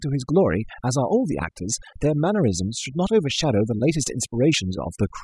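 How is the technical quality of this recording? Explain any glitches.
The recording suffers from overdone noise removal throughout. Bands near the noise floor are cut away, leaving near-silent gaps with twinkling specks.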